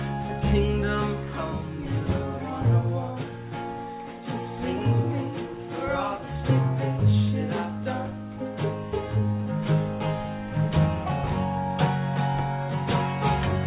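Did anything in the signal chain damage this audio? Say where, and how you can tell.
No, no signal-chain damage heard.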